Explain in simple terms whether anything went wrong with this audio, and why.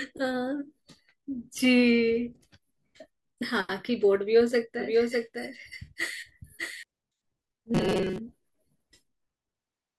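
Two things go wrong in this speech clip.

From 4.79 to 6.83 s there is a doubled audio track: a slightly quieter copy of the speech runs about 0.7 s behind, likely from a second, slower capture path. Unlike a room echo, it never fades and stops abruptly.

From 7.75 to 8.19 s there is robotic sound from repeated short buffers. Most of the real audio is skipped while tiny slices repeat, likely because audio arrives too seldom, forcing a steady 188 Hz metallic buzz. Unlike a dropout, sound continues throughout.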